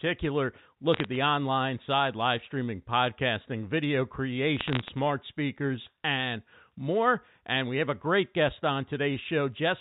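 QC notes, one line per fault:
0.94–1.16 s, bit errors on a digital phone line: sparse sharp ticks before "online side live streaming". Flipped bits corrupt single telephone samples.
4.57–4.89 s, bit errors on a digital phone line: denser crackle after "live streaming podcasting video", before "speakers and more". More bits hit, so more ticks.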